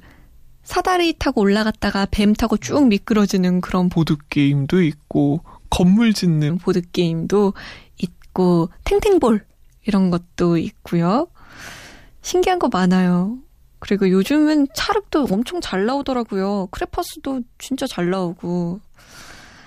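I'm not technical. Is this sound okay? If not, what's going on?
No. A section at the wrong speed runs from 3.93 to 6.5 s: the speech plays at 0.84 times normal speed, sounding slower and roughly three semitones deeper, likely from playback against the wrong clock.

A sudden gain jump at 15.34 s drops the voice and background noise together to a quieter level until the end, likely from a volume change applied instantly.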